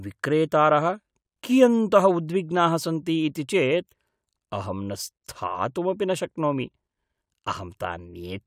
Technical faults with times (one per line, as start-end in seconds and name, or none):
none